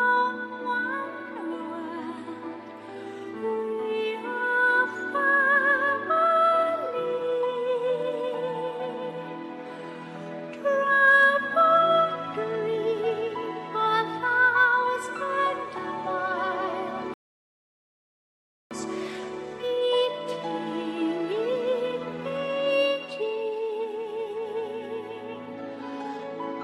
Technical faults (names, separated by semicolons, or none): rebuffering stall